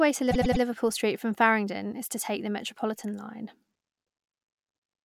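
From 0.30 to 0.62 s, repeated frames make the speech stutter: one 104.5 ms block plays three extra times, adding 313.5 ms, seen as identical repeating spectrogram slices.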